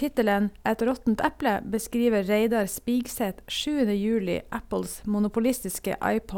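No faults detected in the speech; nothing to flag on this pass.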